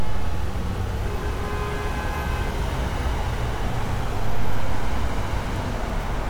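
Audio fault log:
Nothing to log here: every moment of the sound comes across just as it should, with no fault to note anywhere.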